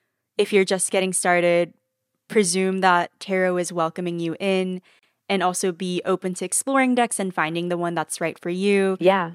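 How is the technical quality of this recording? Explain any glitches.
The recording has one glitch, a gap at a join of encoded pieces, at 4.99 to 5.03 s. Right after "is welcoming you in", the speech breaks off in a gap of about 37 ms before "and also be open" resumes. The audio was evidently encoded in separate chunks, about 6 s long, and stitched together untrimmed, so one chunk's padded final frame and the next chunk's start-up delay both remain. The result is a short hole with smeared edges, after which the speech carries on from where it stopped.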